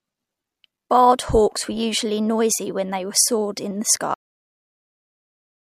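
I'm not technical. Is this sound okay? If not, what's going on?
No. The clip has a cut-off end. Right after "they soared in the", at 4.14 s, the speech stops mid-sound and drops straight into dead digital silence with no fade. The final stretch of audio was never saved or played back.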